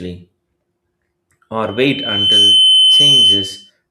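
At 1.66 s a loudspeaker feedback squeal kicks in: the mic is hearing its own speaker, and around 3.1 kHz the loop gain tips past one. That tone swells over most of a second to sit well above the speech, then howls on until 3.70 s.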